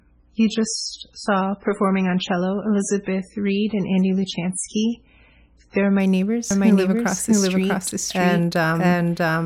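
For the first 6.0 seconds the speech plays from an adaptive stream starting at a low bitrate. The player opened on a cheap version of the stream to begin quickly. Nothing is present above about 10.5 kHz, and the coarse coding adds swirling, smeared artefacts around the speech, which fits a 16 kbit/s MP3 stream. At 6.0 s, once the connection had been measured, quality jumps to a better version consistent with 128 kbit/s, with no gap in playback.

From 6.51 s to the end, a doubled audio track appears. A second full-band copy of the speech enters abruptly at roughly the same level as the original and trails it by around 0.7 s. It is dry, with no decay or room colour, so it sounds like a second overlapping playback rather than a reflection. The likely cause is the same signal captured again through a slower path, or two out-of-step copies held in an edit.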